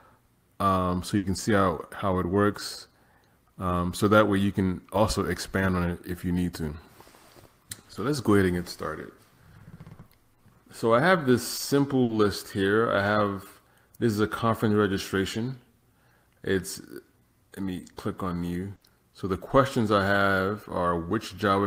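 Three bursts of packet loss interrupt the audio, at 1.17 to 1.25 s, 12.03 to 12.11 s and 18.75 to 18.83 s. Each time the receiver bridges a 60 ms gap by extending the last sound and fading it, heard as a held buzz or a dying hiss, and then jumps ahead past 60 ms of lost material. On a spectrogram each appears as a short, smeared, decaying copy of the preceding spectrum, followed by an abrupt resumption with no transition.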